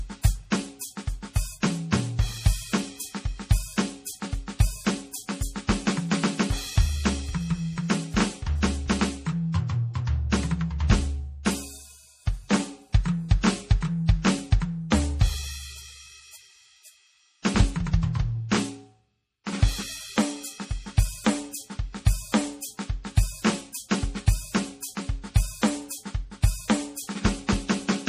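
A music clip with MP3 compression damage throughout. Nothing sounds above 15.3 kHz, and the watery swirl fits a low bitrate near 40 kbps, likely from MP3 encoding.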